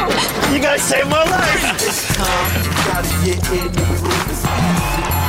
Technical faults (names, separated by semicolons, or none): periodic USB or driver dropouts